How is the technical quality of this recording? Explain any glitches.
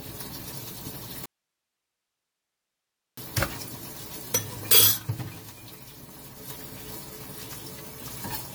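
The technical quality is poor, with two problems: a smeared, degraded character across the whole recording and a clear break near the start.

Generation loss runs throughout. The sound is swirly and hollow, and transients blur more than a 96 kbit/s AAC-LC encode alone would cause. The likely cause is repeated lossy re-encoding, perhaps around ten passes, each quantising on a shifted frame grid so errors accumulate. On a spectrogram, expect patchy holes and smeared onsets, with nothing above 20 kHz.

An audio dropout to a faint residue runs from 1.26 s to 3.17 s, about 1.92 s. The signal cuts out abruptly and returns just as suddenly, leaving only hiss about 55 dB below the normal level. The likely cause is a lost input while the downstream path stayed live. The waveform shows a near-flat band with sheer edges, and the spectrogram shows a dark block filled with faint broadband noise.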